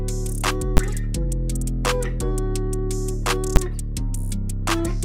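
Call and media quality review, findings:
Invalid numbers at full scale, 0.77 s and 3.56 s: single loud bangs. A calculation produced infinite or invalid values that became the largest positive or negative value for a 10 ms block each time.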